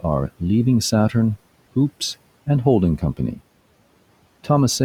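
Between 2.98 and 3.40 s, the noise suppressor cut speech, mistaking it for background and pulling it down by up to about 15 dB for about 150 ms in total. Unlike a dropout, the sound fades rather than vanishing, while the room noise, about 24 dB below speech, carries on.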